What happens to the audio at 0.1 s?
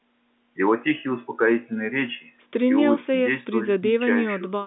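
Nothing goes wrong at 0.1 s: the speech there comes through intact, with only the narrow telephone band expected of G.711 coding.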